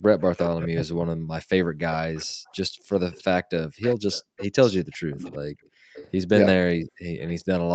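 From 0.53 to 1.44 s the talker's speech dips and breaks up in pieces, falling by roughly 40 dB at its deepest and losing around 0.7 s in total. This is likely speech suppressed in double talk, with the canceller turning down both sides when it could not tell near speech from loudspeaker echo.

From 1.92 s to the end, a delayed copy of the voice trails the original by 404 ms at roughly 15 dB below it. This is likely an echo leak: the far end's echo canceller let through part of what its microphone picked up from the loudspeaker.

The background is gated by the echo canceller at 2.26 to 2.86 s, 4.23 to 4.37 s and 5.6 to 7.05 s. The room sound drops by about 40 dB while the loudspeaker plays, then returns once the canceller releases the microphone.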